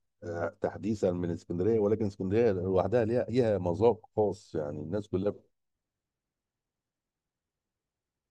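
At 3.28 s, damaged data in the compressed stream corrupts an encoded frame. The decoder misreads it, loses sync and skips ahead to the next valid frame header. In the speech this comes out as a sharp, brief blip of only about 14 ms.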